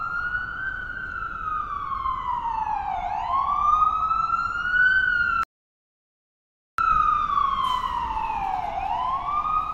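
At 5.43 s the audio halts in a rebuffering stall: the player has used up everything it had downloaded and waits for more data before continuing. The sound drops straight to silence, then picks up at 6.78 s exactly where it left off, with nothing skipped, so the stall adds about 1.35 s to the playback. On a waveform this is a flat, empty gap between two abrupt edges. A spectrogram shows a blank vertical band across all frequencies for the same span.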